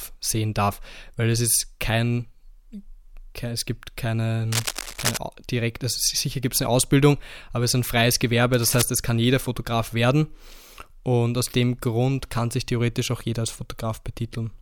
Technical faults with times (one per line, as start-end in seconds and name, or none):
4.52-5.17 cable scratch noise
8.53-8.82 cable scratch noise